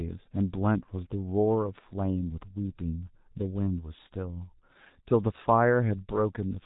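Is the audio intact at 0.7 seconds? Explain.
No. At 0.7 s, as throughout the clip, the speech carries heavy G.723.1 codec damage, consistent with a low rate near 6 kbit/s. Its coarse 30 ms frames blur consonants into a muffled, hoarse sound, and a spectrogram shows nothing above 3.8 kHz, with smeared, blocky harmonics.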